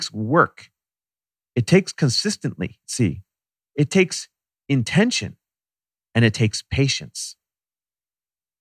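Nothing in the recording stands out as a technical fault; the speech runs along without any dropout, glitch or disturbance worth pointing to.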